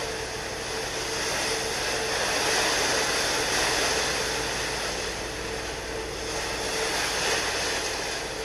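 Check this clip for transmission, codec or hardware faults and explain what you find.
One fault stands out, a doubled audio track from 3.52 to 6.68 s. Here a second copy of the sound runs about a second behind the first. It sits roughly 5 dB below the original. The copy is full-band and dry, with no decay or room colour. It cuts in and out abruptly at both ends. The likely cause is a second, slower capture path or an edit leaving two offset copies.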